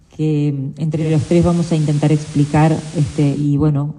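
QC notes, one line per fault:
0.89–3.52 s digital radio blending to analogue: 319 ms cross-fade to FM and back, hiss about 25 dB below the signal, level shifts about 2 dB; smooth, not a dropout.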